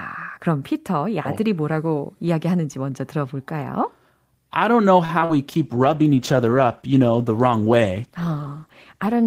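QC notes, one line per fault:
5.05–5.11 s, short stall from a late packet: a packet arrived late, the jitter buffer ran dry, and the receiver held the last sound for about 37 ms before resuming where it left off. Nothing is lost, but the speech hangs briefly with a faint buzzy sustain and the timing slips by that amount.
5.19–5.23 s and 5.25–5.38 s, short concealed packet loss: two gaps of about 20 ms and 40 ms never reached the decoder, so it extrapolated the preceding sound to cover them and blended back in. Each comes across as a quick smear or wobble, and the second stretches timing by a few milliseconds.
5.52 s to the end, call bitrate drop: the bandwidth estimate fell and the encoder was pushed from 48 kbps down to 13 kbps for the rest of the clip. The coarser coding makes the speech sound rough and watery, with the upper frequencies dulled and muffled.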